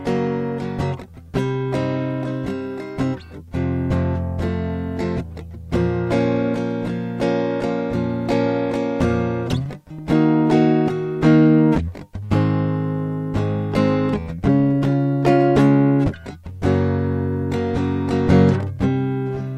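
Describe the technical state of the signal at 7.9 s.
At 7.9 s the music plays through intact, with no dropout, click, distortion or other audible fault at that moment.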